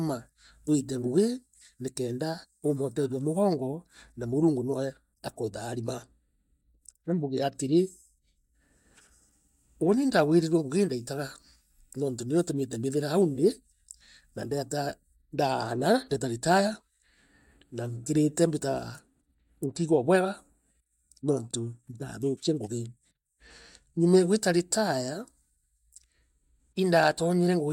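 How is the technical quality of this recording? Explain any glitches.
One glitch: hard clipping at 24.14 to 24.17 s. For about 33 ms, the speech peaks exceeded what a stage in the chain could pass, by about 1 dB, so their tops were cut flat. The flattening adds high harmonics, heard as a brief crackle on that peak.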